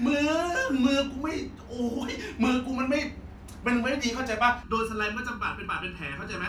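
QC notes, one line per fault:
4.63–6.49 s: channel delay (comb filtering). One channel lags by just under a millisecond; summed to mono, notches start near 700 Hz, making speech hollow and phasey.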